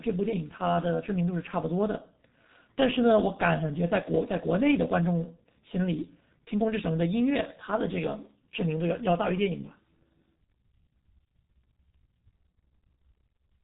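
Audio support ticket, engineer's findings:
Speech muffled and hoarse throughout, consonants smeared, nothing above 3.8 kHz. G.723.1 codec, heavily damaged; coarse 30 ms frames at a rate that points to about 6.3 kbit/s.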